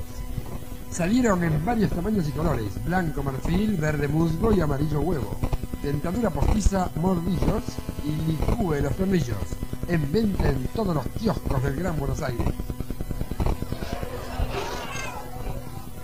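From 7.33 s to 8.40 s there is a GSM phone buzz, sitting about 21 dB below the signal. A nearby 2G handset on a call is bursting its radio output at about 217 Hz, and the audio circuitry rectifies those pulses into a harsh, raspy buzz dense with harmonics that ignores the programme. It holds nearly steady. Mains hum sits lower, at 50 or 60 Hz, and sounds smoother and rounder.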